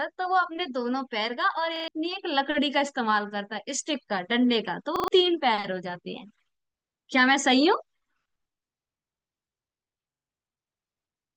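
At 1.76, 4.96 and 10.12 s, a repeated buffer stutters: an identical slice, consistent with a 40 ms buffer, replays three or four times with hard joins. Unlike a dropout, no silence is heard, though roughly 100 to 150 ms of sound goes missing.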